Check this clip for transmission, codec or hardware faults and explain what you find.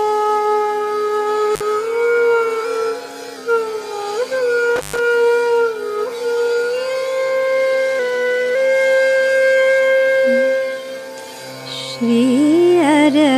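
Two kinds of fault are present: an intermittent contact and a drift correction step.

Intermittent contact at 1.54–1.62 s and 4.76–4.99 s: a loose plug or cable briefly opens the signal path, cutting the sound for about 53 ms and then 119 ms, with crackle at each edge and faint hiss during the gap.

Drift correction step from 2.64 to 3.37 s and again from 7.99 to 8.55 s: the playback rate jumps 6.14% faster, raising pitch by 103 cents, and later runs 6.14% slower, dropping 110 cents, before snapping back each time. This is likely clock-matching software changing rate in one step to manage its buffer.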